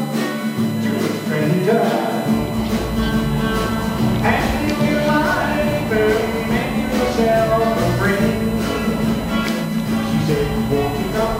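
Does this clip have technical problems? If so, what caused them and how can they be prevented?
Yes. A steady whine of fixed pitch runs through the whole clip, built on 1 kHz with its strongest component at the 2 kHz multiple, sitting roughly 20 dB below the audio. This is USB whine: the USB bus pulls current in 1 ms frames, and that 1 kHz pulsing leaks into the audio path through shared power or ground. To prevent it, power the interface separately or isolate its ground from the USB supply.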